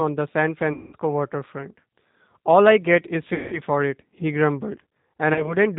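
Throughout, the speech carries the sound of the G.729 codec at 8 kbit/s: nothing above 4 kHz, and a slightly rough, synthetic texture because each 10 ms frame is rebuilt from a vocal tract filter, a pitch predictor and a few pulses rather than the actual waveform.

VoIP packet loss concealed by the speech codec appears three times. From 0.73 to 0.95 s, about 200 ms of audio is missing, and from 3.34 to 3.61 s, about 180 ms. Each gap is bridged by the decoder repeating its last pitch and filter at falling gain, giving a buzzy tone or coloured noise that fades. At 5.34 to 5.56 s, only 20 ms is lost, but because each frame depends on the previous one, the speech stays weak or distorted for tens of milliseconds or more afterwards.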